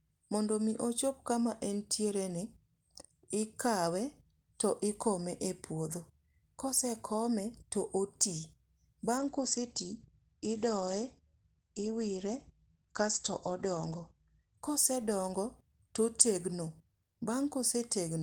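From 9.18 s to 15.65 s a call bitrate drop starves the encoder, which fits a fall from 32 kbps to about 14 kbps. Bandwidth narrows from 20 kHz to 8 kHz, and for about 5.4 s the speech sounds muffled and coarse before recovering.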